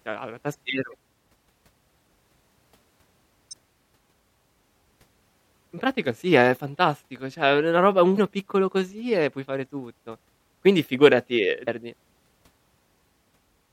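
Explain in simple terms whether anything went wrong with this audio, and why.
Damaged data in a compressed stream causes brief glitches at 0.90–0.95, 3.49–3.53, 8.14–8.18 and 11.64–11.68 s. Corrupted bytes make the decoder misread frames, lose its place and jump ahead.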